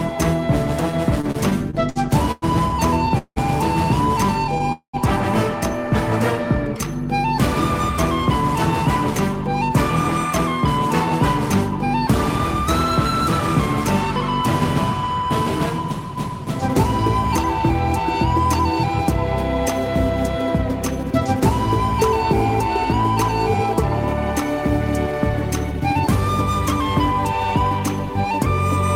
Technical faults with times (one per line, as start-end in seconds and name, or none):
1.21-4.62 repeated stalls (stutter)
4.72-4.95 call audio freeze
15.11-19.81 jitter buffer speed-up
24.55-26.06 jitter buffer speed-up